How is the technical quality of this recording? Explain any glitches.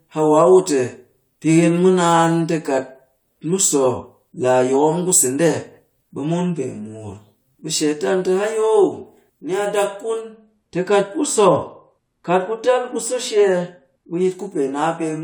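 The recording has one technical fault, in its final seconds. From 10.21 to 14.21 s, de-emphasis is applied wrongly: a treble cut meant for pre-emphasised audio slopes smoothly downward, about 11 dB at 10 kHz, leaving the speech dull and muffled rather than abruptly band-limited like a low-pass cutoff.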